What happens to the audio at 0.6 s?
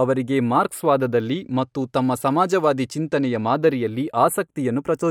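Channels drifting apart is at work at 0.6 s, as it is across the whole clip. The two channels run on slightly mismatched clocks, with an error of roughly 50 parts per million, so the delay between them keeps growing, reaching only a fraction of a millisecond by the end. When the channels are summed to mono, the resulting comb-filter notches glide slowly through the spectrum, giving the speech a slowly moving flanging colour.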